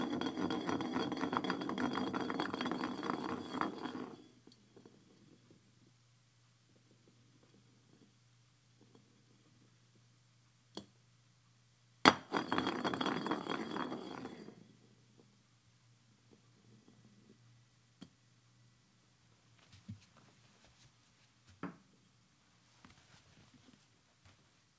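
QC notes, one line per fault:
No faults; call-path audio tops out near 8 kHz.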